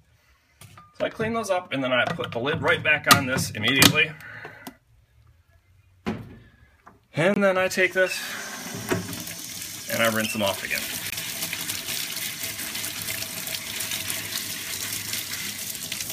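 At 7.34 s and again at 11.10 s, compressed frames arrived with flipped bits, the decoder rejected them, and the player filled the gap with silence: a corrupt frame muted. Each time the sound cuts out abruptly, for about 44 ms from 7.34 to 7.38 s and about 42 ms from 11.10 to 11.14 s, then resumes on schedule. Timing is preserved, so nothing after the holes is shifted.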